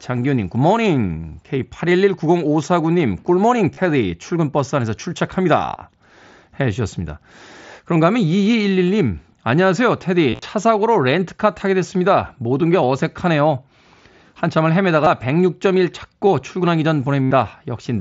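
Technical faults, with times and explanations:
3.74 to 17.31 s, concealed Bluetooth headset packet loss: headset voice packets dropped at 3.74, 5.76 to 5.82, 10.30 to 10.42, 15.04 and 17.23 to 17.31 s, and the receiver looped recent waveform to fill the gaps. The longer runs, up to 75 ms, sound like a buzzy held tone that warbles as the real sound resumes.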